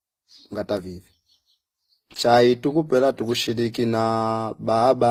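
Transcoding between lossy codecs affects the whole speech clip. Nothing is present above 15.7 kHz, and two distinct sets of coding artefacts sound at once. The likely cause is low-rate HE-AAC audio re-encoded to Opus, with the second codec spending bits on the first codec's damage.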